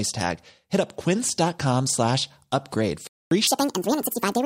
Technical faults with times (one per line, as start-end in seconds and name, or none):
3.07-3.31 Bluetooth dropout
3.47-4.46 section at the wrong speed